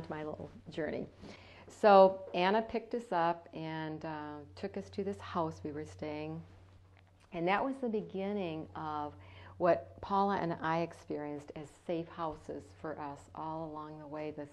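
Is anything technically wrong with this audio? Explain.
No, nothing technically wrong can be heard here.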